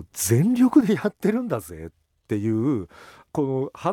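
A speech recording where, from 0.81 s to the end of the clip, one channel drops out, most likely because one side of the stereo feed stopped carrying signal while the other continued. When the two sides are folded to mono, the speech they shared suddenly loses about 6 dB, so the level steps down abruptly at 0.81 s and stays lower, and any sound that lived only in the missing channel vanishes entirely for the rest of the recording.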